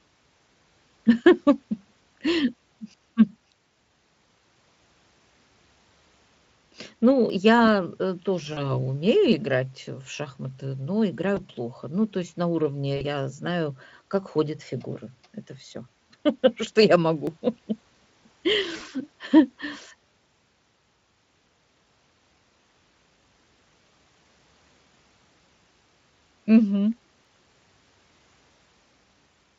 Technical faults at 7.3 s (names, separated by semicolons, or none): audio missing between chunks